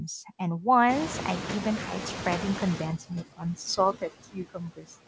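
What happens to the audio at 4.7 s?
At 4.7 s the sound is inside a stretch of speech cut by the noise suppressor, running from 3.76 to 4.97 s. The suppressor mistook quieter parts of the speech for noise and pulled them down by as much as about 21 dB, across roughly 0.7 s in total, so consonants and endings sound swallowed. On a spectrogram, upper-band energy thins abruptly; the waveform shows sudden dips in the envelope. Noise suppressor artifacts persist here too: residual background is cut by about 20 dB, sinking between the words and rising under them.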